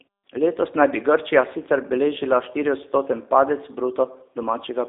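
Throughout, the speech sounds rough, slightly synthetic and boxed-in between about 300 Hz and 3.7 kHz. It is G.729 codec damage, rebuilt from coarse predictive models at a rate that fits 8 kbit/s.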